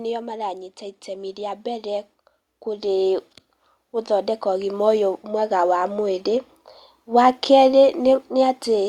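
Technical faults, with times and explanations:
0.05–0.79 s: automatic gain falling. The gain control judged the opening input too loud and pulled its gain down by about 4 dB over roughly three quarters of a second. The speech starts at full level and then sinks, and the background noise floor drops with it. That shared dip shows the change comes from the processing stage adjusting overall gain, not from the talker getting quieter.
0.78–2.13 s and 4.06–6.34 s: automatic gain rising. In each span the gain control decided the input was too quiet and raised its gain by about 5 dB. The rise takes about 1.4 s the first time and about 2.3 s the second, so both are slow swells. Speech and background get louder together because the whole signal is being scaled. The first rise follows straight on from the earlier drop, so the control reverses its direction at about 0.78 s.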